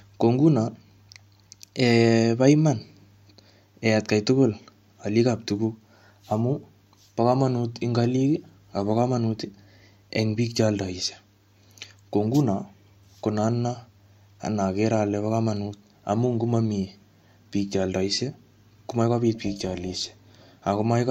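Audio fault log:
19.35–20.44 s, overlap-add ripple: the speech takes on a metallic buzz with extra tones around the voice, its level pulsing by about 6 dB at around 300 Hz. Windowed frames were recombined with an overlap that fails to sum to constant gain, so loudness dips once per frame.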